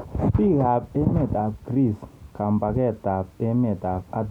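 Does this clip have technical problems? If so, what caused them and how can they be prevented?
No, there are no technical problems to report here.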